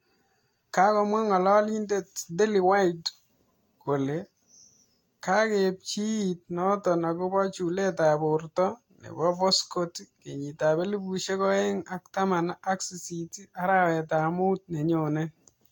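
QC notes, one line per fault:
Throughout, generation loss: the speech has a swirly, smeared, hollow quality heavier than a single lossy encode would give, with consonant onsets blurred and nothing above 19.1 kHz. The likely cause is the audio being decoded and re-encoded around five times, which fits Vorbis at roughly 65 to 68 kbit/s. Each pass quantises again on a shifted frame grid, so noise and spectral holes stack up instead of staying fixed.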